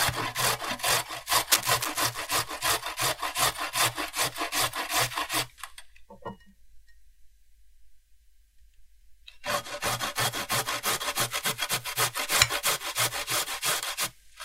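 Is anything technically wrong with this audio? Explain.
Yes. From 1.51 to 2.27 s there is cable scratch noise. The likely cause is a worn cable, connector or control carrying a DC voltage being moved, so that its contact resistance jumped around rapidly and fed that fluctuation into the signal. For those three quarters of a second, dense, irregular bursts of noise scratch and rustle across the audio, at roughly the same level as the sound itself.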